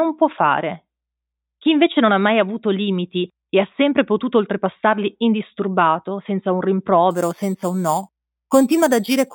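The rate was raised by simply repeating each sample without a smoothing filter, which fits an 8 kHz original. From 7.11 s, after "oltrepassarli indisturbato senza un", to the end, this imaging from sample-and-hold upsampling adds mirrored copies between 4 and 8 kHz, about 17 dB below the speech, heard as a metallic fizz.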